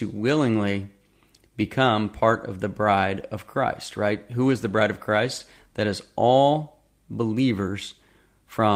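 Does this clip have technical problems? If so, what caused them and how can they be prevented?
No, there are no technical problems to hear in this speech recording. With no fault present, there is nothing here that needs a cause traced or a fix put in place.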